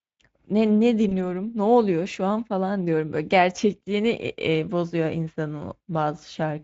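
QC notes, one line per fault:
1.09–1.12 s, VoIP packet loss concealed by the speech codec: a brief gap, consistent with one lost 20 ms frame, is filled by the Speex decoder repeating its last pitch and filter at falling gain. On a spectrogram, smeared harmonics fade, and the waveform dips before recovering.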